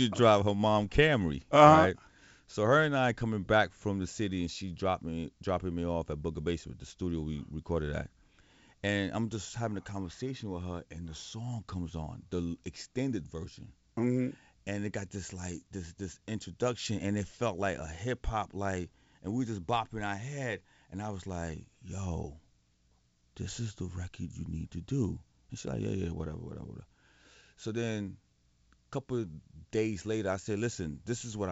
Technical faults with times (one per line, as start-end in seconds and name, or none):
none